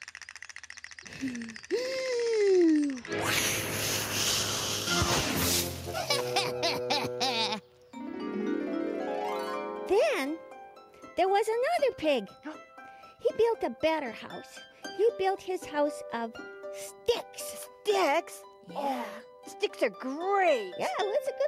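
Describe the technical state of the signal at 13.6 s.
At 13.6 s the signal is intact, with no audible dropout, distortion or other technical fault at that moment.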